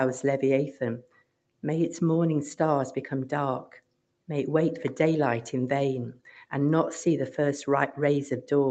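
A speech-tuned noise suppressor left running on non-speech audio makes the level sway by a few decibels, so held material pumps and tails thin while attacks survive, unlike compressor pumping, which follows loudness. At 1.0–1.63 s and 3.66–4.28 s, the sound is cut by the noise suppressor, sinking by up to about 19 dB for roughly half a second each time. The sound fades rather than vanishing abruptly as a dropout would. Top end stops near 8 kHz through the Opus call path.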